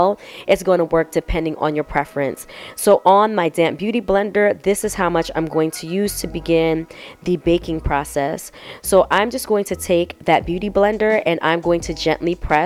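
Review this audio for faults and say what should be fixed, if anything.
No faults can be heard anywhere in this audio, so there is nothing to fix. It can be left as it is.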